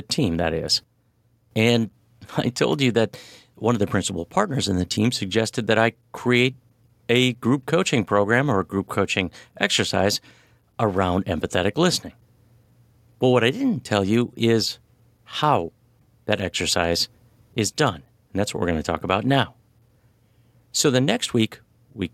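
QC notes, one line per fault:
No technical faults are audible anywhere in the speech signal.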